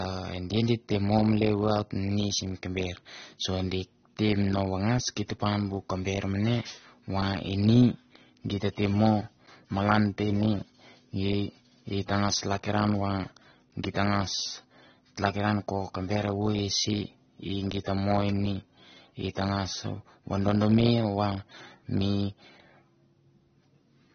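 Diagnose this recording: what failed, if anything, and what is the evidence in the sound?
Likely AAC compression at the codec stage: throughout, the speech stops dead above 6.3 kHz, with smeared, warbling sibilants. A plain low-pass filter wouldn't warble. This fits a starved bitrate near 24 kbps.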